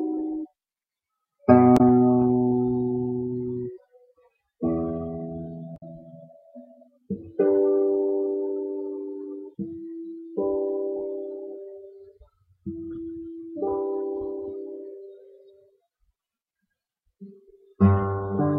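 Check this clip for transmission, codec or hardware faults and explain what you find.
Two brief faults are audible, both damaged data in a compressed stream, at 1.77–1.81 s and 5.76–5.83 s. Corrupted bytes make the decoder misread frames and lose sync, producing short audible glitches.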